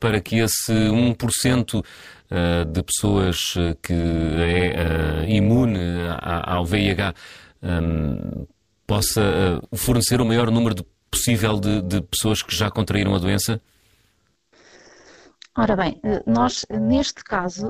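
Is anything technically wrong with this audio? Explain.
Yes. Overlap-add ripple runs through the whole speech clip. The signal was split into windowed frames and summed back together with an overlap that does not add up to a constant gain, so the level swings by about 11 dB once per frame. That modulation repeats at around 300 Hz, fast enough to be heard as a metallic buzz with extra tones around the voice rather than as distinct pulses.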